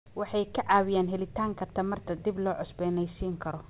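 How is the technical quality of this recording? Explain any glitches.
Listening through this speech clip, nothing stood out as a glitch, and the narrow telephone-style band of a call path carrying nothing above 4 kHz is what that path normally produces.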